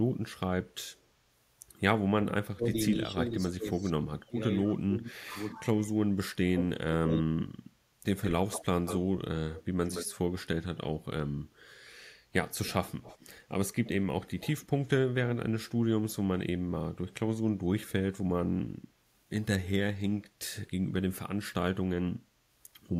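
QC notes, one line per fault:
0.72–1.0 s, echo leak: a very faint delayed copy of the speech trails it by about 241 ms, roughly 40 dB down, so it's barely there. Likely the far end's echo canceller letting some loudspeaker pickup slip back.
2.11–5.36 s and 6.28–7.49 s, speech suppressed in double talk: the talker keeps ducking in pieces while the other side speaks, about 1.5 s total with dips of around 25 dB in the first stretch, then about 1 s with dips near 40 dB in the second. Likely the canceller couldn't tell talker from echo and pulled both down.
8.23–8.98 s and 9.55–10.41 s, echo leak: a much stronger repeat this time, only about 10 dB under the speech and about 169 ms behind it, so it reads as a clear doubled slapback. Likely residual echo the canceller failed to remove.
12.65–14.88 s, echo leak: a longer stretch of echo about 249 ms late, sitting about 20 dB below the speech, audible as a shadow under the speech. 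Likely loudspeaker pickup the canceller didn't fully subtract.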